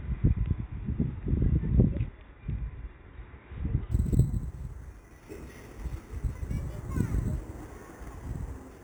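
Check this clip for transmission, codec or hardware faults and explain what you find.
One fault appears: imaging from sample-and-hold upsampling, from 3.91 s to the end of the clip. The sound was carried at a low rate, consistent with 8 kHz, and then raised to the output rate, consistent with 44.1 kHz, by repeating each sample with no smoothing filter. Mirrored copies of the spectrum therefore fold above the original band, the first filling roughly 4 to 8 kHz at about 29 dB below the sound. The result is a bright, metallic fizz whose level rises and falls with the sound.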